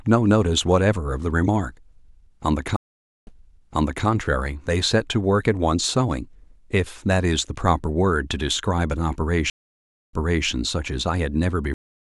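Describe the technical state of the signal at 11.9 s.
A cut-off end starts at 11.74 s, so at 11.9 s the signal is digital silence. The final stretch of speech was never written out, and the sound stops mid-utterance with no natural decay, dropping straight to silence and staying there.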